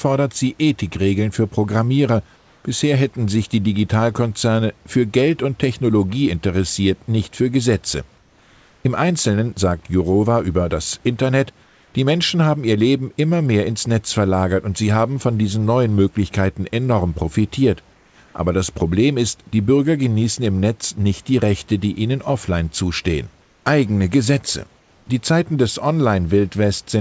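In this speech recording, the room background drops out in brief pauses at 2.36–2.64, 11.64–11.94, 17.94–18.18, 23.42–23.66 and 24.78–25.06 s, replaced by a flat, textureless hiss about 2 to 5 dB quieter. This is comfort noise in place of the background, likely from discontinuous transmission filling silence with synthetic noise.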